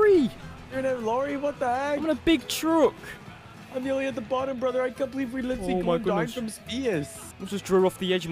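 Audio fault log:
No faults can be heard anywhere in the audio. Nothing in the sound calls for an entry in this log.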